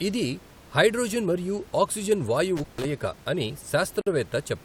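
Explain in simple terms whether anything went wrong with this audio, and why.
Two things go wrong in this speech clip. Around 2.57 to 2.85 s there's an intermittent contact: a loose plug or cable briefly opens, so the sound cuts out for about 146 ms with crackle on either side. Then at 4.01 s there's a gap at a join of encoded pieces, a 52 ms hole where two separately encoded chunks were stuck together without trimming the padding each one adds. The faint room noise underneath is just part of the recording.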